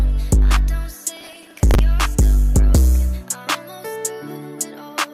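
From about 1.17 s to 1.79 s there's a burst of processor overload crackle, a gritty, tearing texture sitting on top of the sound for a bit over half a second. Here the system couldn't keep up with its small buffers, likely a few milliseconds each, and missed a long run of deadlines. Each miss got filled with a stale chunk of earlier audio, hard-edged at both ends, so you hear rough repeated grit that stops once the load eases.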